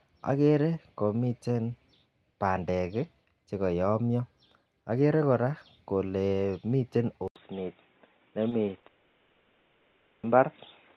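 At 7.28 s the sound drops out for about 80 ms and resumes duller and boxier. It stays that way to the end. This is most likely an input switched to a poorer device. Before the switch, the spectrogram shows energy reaching up to around 12 kHz, as expected from the call codec. After it, everything above 3.8 kHz is gone, leaving a hard ceiling. The level steps by roughly 5 dB, and a new steady noise floor sits far below the signal, on the order of 45 dB down. On the waveform the 80 ms gap is a flat notch, followed by a slightly different envelope.

Next come three short concealed packet losses at 8.49–8.53, 8.65–8.69 and 8.79–8.85 s. The first two each replace 20 ms of missing audio, and the third replaces 40 ms. Each time, the receiver stretched the preceding sound to cover the hole and then blended back into the real signal, which is heard as a brief smear or wobble. On a spectrogram each appears as a short patch of frozen, overly regular harmonics or smoothed noise. 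The waveform shows a slightly repetitive stretch.

From 8.87 to 10.25 s, a long network dropout likely removes about 1.4 s of audio. The receiver keeps continuing the last sound as a buzzy, fading tail that decays into low steady noise, and the sound then resumes without the missing stretch. The spectrogram shows smeared, decaying bands giving way to a faint flat floor. The waveform tapers toward near silence before real audio returns.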